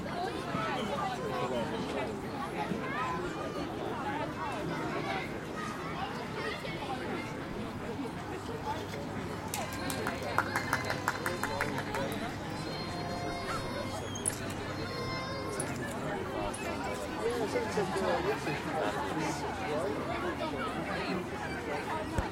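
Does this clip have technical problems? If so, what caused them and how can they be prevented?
No, there are no audible technical faults in this audio, so nothing needs preventing.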